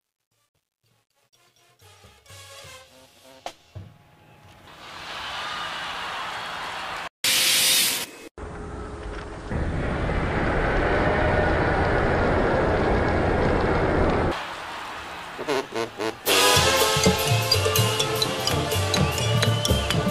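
During the fade-in, 0.0 to 5.10 s, truncation distortion on a fade: undithered 11-bit steps make the quietest stretch to 3.32 s sound gritty, with a stair-stepped waveform and speckled spectrogram.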